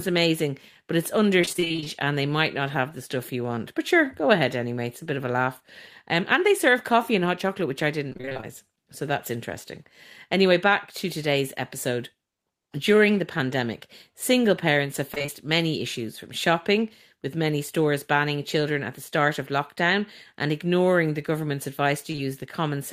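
Repeated packet loss (robotic sound) hits three stretches: 1.41 to 1.88 s, 8.09 to 8.44 s, and 15.14 to 15.30 s, the last falling between "pandemic single parents have" and "many issues from shopping". Twelve, nine and four gaps follow each other closely, none longer than 27 ms, and each is patched by extending the preceding sound. Roughly half of each stretch is synthesised fill, so the speech turns choppy, with fragments missing.

Short concealed packet loss occurs twice back to back, at 22.12 to 22.16 s and 22.16 to 22.20 s, just after "and ignoring the government's". Each time about 20 ms of audio failed to arrive, and the receiver bridged the hole by carrying the last sound forward before blending back into the real signal. Heard together, the two patches make a brief smear or wobble rather than a clean break.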